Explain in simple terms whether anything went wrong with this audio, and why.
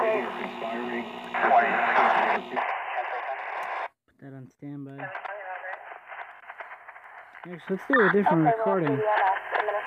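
A fast ticking, like a zip being pulled, rides on the sound from 7.49 to 7.85 s while its loudness shifts. This is zipper noise: the volume moved in small jumps, about fifty per second, instead of gliding, and each jump clicked.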